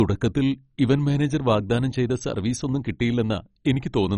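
From start to end the speech is dull, with nothing above 10.4 kHz, and upper bands flicker in and out amid heavy gurgling, granular distortion. This is likely MP2 compression at a rate near 32 kbps; a plain low-pass filter would leave the remaining sound clean.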